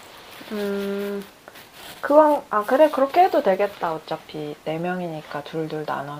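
No technical faults can be heard anywhere in this speech recording. There are no events to place on the timeline.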